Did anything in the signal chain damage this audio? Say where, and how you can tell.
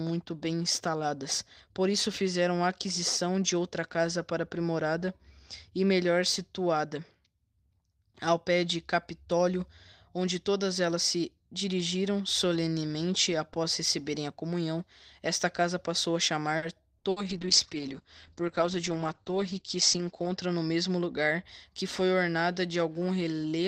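Yes, the damage comes from the network and the jitter buffer on the receiving side of a call, all between about 16.6 s and 21.5 s.

A short stall from a late packet shows at 16.57 to 16.65 s. A packet arrived after its playout time, the jitter buffer ran dry, and the receiver held the last sound for about 50 ms until the packet turned up. Playback then resumed where it left off, so nothing is lost, but one sound is drawn out with a faint buzzy quality and the stream sits about 50 ms later from then on.

Two bursts of packet loss follow, at 16.98 to 17.07 s and 17.10 to 17.25 s. Each time, consecutive packets never arrived in time to be played. The receiver extended the preceding sound for about 60 ms, fading it into a held buzz or hiss. It then jumped ahead, so roughly 60 ms of real audio is gone in each gap.

A call bitrate drop runs from 17.31 to 21.50 s. The sender's bandwidth estimate collapsed and the encoder was pushed from full quality down to a much leaner rate, which fits a fall from about 32 kbps to about 9 kbps. 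It stayed at the bottom for about 3.1 s. The top end narrows from around 20 kHz to about 8 kHz, so the sound turns muffled and somewhat watery and rough until the rate climbs back.

A jitter buffer speed-up sits inside that stretch, from 18.62 to 19.39 s. The queue of delayed packets had grown past its target, so the receiver trimmed out short pitch-period-sized slices repeatedly, about 50 ms in total. Pitch stays put but the pace rises to about 107 percent, which gives that passage a slightly hurried rhythm.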